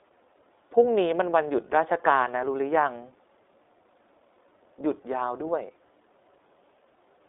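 The whole speech clip runs through the iLBC codec: nothing above 3.7 kHz, and frame-by-frame coding leaves a plainly rough, synthetic edge, which fits its 20 ms mode.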